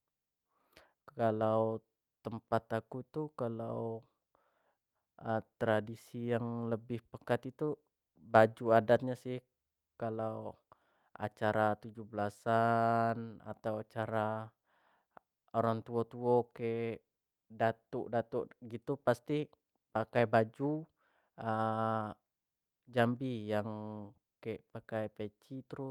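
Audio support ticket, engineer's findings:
No fault found on listening review of the speech recording. Nothing heard that points to a failing component, so no further action is needed on this ticket.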